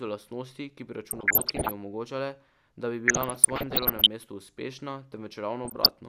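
Weak DAB reception lets bit errors slip past error correction into the MP2 audio data, and this DAB burbling corrupts samples and scale factors, putting short blips of noise in single sub-bands and making sub-bands jump in level for up to a frame. The speech burbles from 1.11 to 1.71 s, after "lastnosti ki bi", where the error rate is roughly one to two percent. It returns more mildly from 3.08 to 4.07 s, between "omogočale da bi" and "mestu uspešna", and briefly from 5.65 to 5.89 s.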